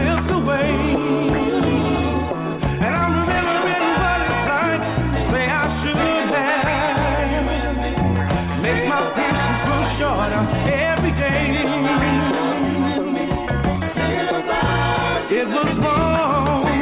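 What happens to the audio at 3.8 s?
Nothing goes wrong at 3.8 s; the audio plays through that moment intact, with no dropout, click, glitch or other fault.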